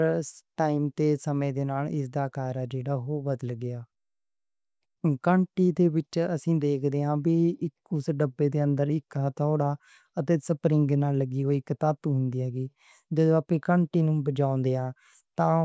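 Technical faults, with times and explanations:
No technical faults can be heard anywhere here.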